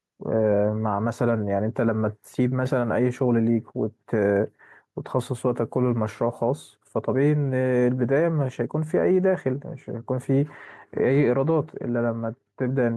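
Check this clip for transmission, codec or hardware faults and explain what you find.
One hardware fault runs through the whole speech clip: gain pumping. The gain swings by about 5 dB, ducking under loud syllables, likely from excessive input gain driving a fast limiter. Unlike a noise gate, it never drops the background to silence.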